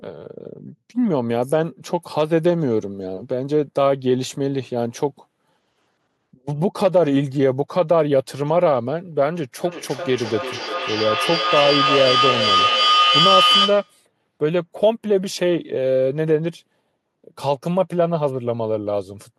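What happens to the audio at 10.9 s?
Feedback howl runs from 9.65 s to 14.02 s, so 10.9 s falls inside it. Two devices sharing the call in one room form a loop from microphone to loudspeaker and back that adds level on each pass. The repeats grow instead of dying away and narrow to a tone of around 1.5 kHz, with repeats roughly every 400 ms. At its peak it reaches about 2 dB above the speech.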